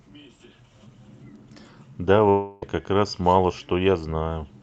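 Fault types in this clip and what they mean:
long network dropout: From 2.29 to 2.63 s, about 330 ms of the speech never arrives, likely because packets were lost in transit. The receiver fills almost all of that gap by extending the last sound into a buzzy tone that fades, leaving no true silence. On a waveform, the envelope decays smoothly with no flat zero stretch. On a spectrogram, which tops out at 8 kHz through the Opus call path, smeared, repeating harmonics replace normal detail until the speech abruptly resumes.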